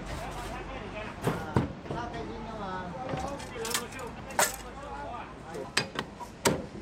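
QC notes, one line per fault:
No technical faults are audible; the signal stays steady and continuous across the whole clip.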